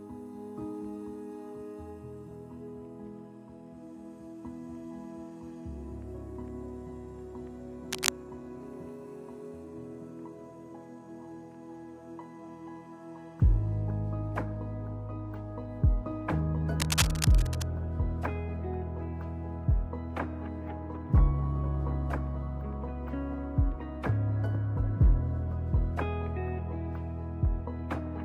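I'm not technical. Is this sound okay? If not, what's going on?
No. There's cable scratch noise twice: a short burst from 7.92 to 8.10 s, and a longer one from 16.80 to 17.66 s. It's a rough, crackly rustle about as loud as the sound itself, likely from a worn cable or plug being moved.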